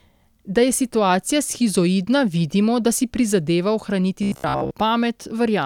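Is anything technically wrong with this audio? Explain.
Yes. From 4.23 to 4.71 s, after "vidimo da si prizadeva", robotic sound from repeated short buffers appears. A roughly 15 ms chunk likely loops, imposing a rigid metallic 66.8 Hz buzz.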